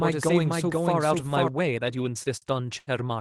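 From the very start until 1.48 s, the speech carries a doubled audio track: a second full-band copy at about the same level trails the original by roughly half a second, likely from a second, slower capture path. It sounds like two overlapping takes of the same speech. On a spectrogram, every harmonic pattern appears twice, offset in time. The copy ends abruptly at 1.48 s rather than decaying, and it shows no added room smearing.

From 2.23 to 2.90 s, the speech suffers repeated stalls (stutter): the jitter buffer ran dry four times, and each time the receiver stretched the last sound to bridge the wait. These fills total 155 ms, with the longest 76 ms, covering about 23% of that stretch. Nothing is lost, but the speech drags and hiccups. In the waveform, the gaps show as short held or looping segments. In the spectrogram, they appear as flat, smeared bands, with the longer fill fading.

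Throughout the clip, the call codec caps content near 12 kHz, which fits Opus at 24 kbps.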